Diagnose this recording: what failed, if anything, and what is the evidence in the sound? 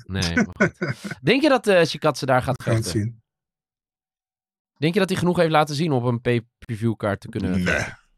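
Codec stage: gaps at joins of encoded pieces, 34 ms at 0.53 s, then 43 ms at 2.56, 4.60 and 6.65 s, left by untrimmed encoder delay and padding.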